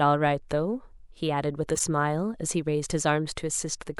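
A brief chirpy noise burst at 1.75 to 1.81 s is a corrupt frame decoded: damaged bits in a couple of compressed frames were played anyway.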